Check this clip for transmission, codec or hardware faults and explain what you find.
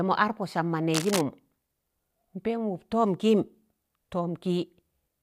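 There is one hardware fault, cable scratch noise, from 0.92 to 1.21 s. The likely cause is a worn cable, plug or control being moved, so its contact resistance jumps about rapidly and injects ragged bursts of noise into the signal path. For roughly three-tenths of a second, a dense, uneven scratching and rustling rides over the speech, sitting only a little below the speech level, so it is clearly audible.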